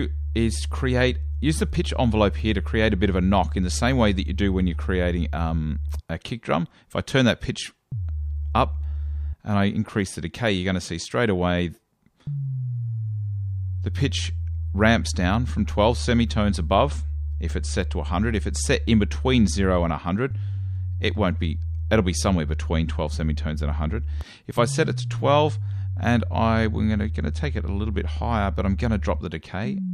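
The sound has one block of digital silence at 24.21 s. For about 0.43 ms the signal drops straight to silence and comes straight back, with no fade on either side. A gap this short is too brief to hear as a hole. It is heard as a single tick, caused by the sudden jumps to silence and back. A run of silence like this points to an output buffer that was not filled in time.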